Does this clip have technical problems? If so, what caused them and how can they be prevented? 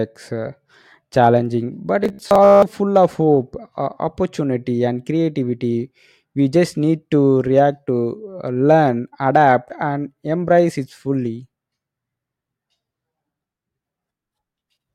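Yes: robotic sound from repeated short buffers between 2.04 and 2.62 s, after "uh challenging but" and before "full of hope". It's a rigid metallic buzz near 66.8 Hz, likely from a roughly 15 ms chunk replayed while most real audio got skipped. Keeping the audio buffer fed steadily prevents it.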